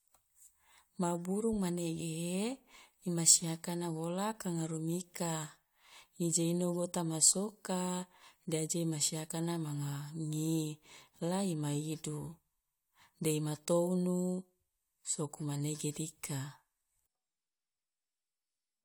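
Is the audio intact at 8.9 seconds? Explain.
Yes, at 8.9 seconds the audio runs cleanly, with no break, dropout, click or other fault to be heard at that moment.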